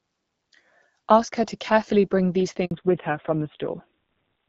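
At 2.65 s there's a handover gap: the call got passed between networks and no speech frames came through for about 60 ms, so the voice dies away quickly and sits in silence until the new link picks up at 2.71 s.

Right after, from 2.71 s to the end, there's a fallback to narrowband. The HD Voice link, which sounded fairly clean before, gives way to an older narrowband codec, likely AMR-NB at around 5.9 kbit/s. Nothing above 4 kHz survives, so the voice turns muffled and rougher.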